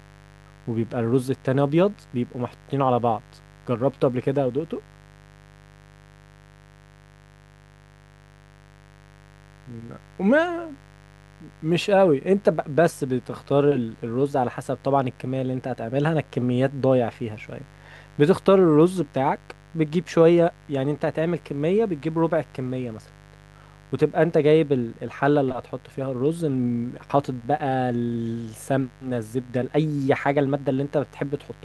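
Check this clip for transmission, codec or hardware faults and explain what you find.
A mains buzz runs through the whole speech clip, from start to finish, sitting around 30 dB below the speech. Switching spikes from a dimmer, rectifier or unshielded cable enter the signal twice in each 50 Hz mains cycle, and these sharp edges spread energy across 50 Hz harmonics reaching several kHz. The result is a steady, raspy buzz under the speech. A spectrogram shows evenly spaced horizontal lines stacked up the frequency axis, and the waveform shows small spikes repeating at 100 Hz through the pauses.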